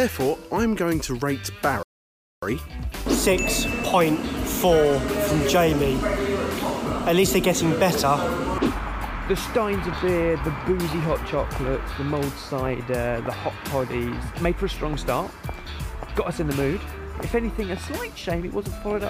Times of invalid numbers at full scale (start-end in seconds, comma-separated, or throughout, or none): none